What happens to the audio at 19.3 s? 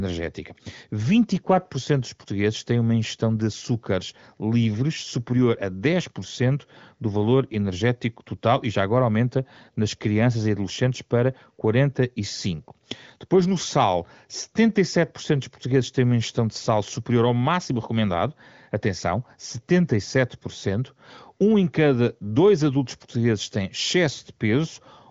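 At 19.3 s the speech comes through intact, with no dropout, glitch or distortion, only the steady band-limited sound of the AMR wideband (HD Voice) codec, which carries nothing above about 7.4 kHz.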